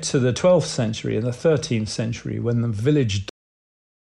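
Cut-off end at 3.29 s: the final stretch of speech was never written out, so the audio halts mid-sound and drops straight into digital silence without any decay.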